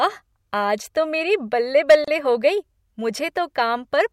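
Speech, where separately encoded pieces were joined untrimmed, leaving a gap at a join of encoded pieces: encoder delay and padding open a 31 ms gap with smeared edges at 2.05 s, just before "हो गई".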